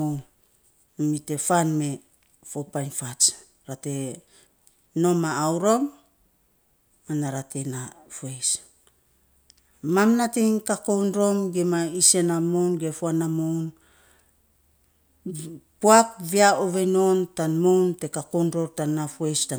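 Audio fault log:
Nothing to log here, as the speech comes through with no audible technical problems anywhere in the clip.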